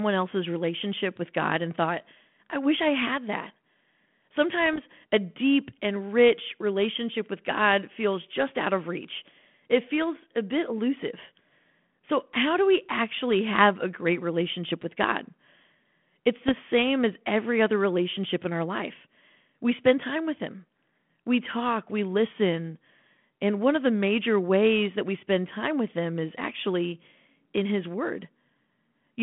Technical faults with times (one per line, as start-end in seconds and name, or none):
4.66-4.80 bit errors on an ADPCM link
16.48-16.53 bit errors on an ADPCM link